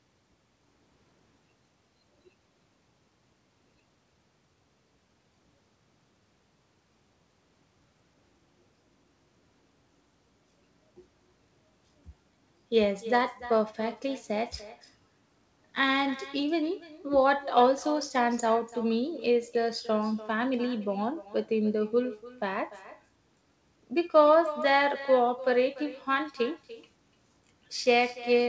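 From start to finish, echo with no canceller: the far loudspeaker feeds its microphone unremoved, so speech returns roughly 300 ms later, about 17 dB quieter and thinner.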